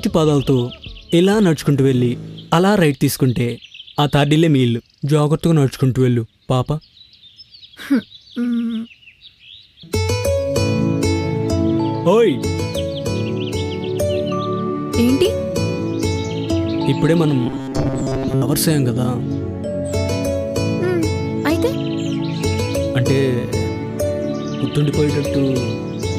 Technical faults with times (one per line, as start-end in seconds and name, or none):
17.47-18.42 robotic sound from repeated short buffers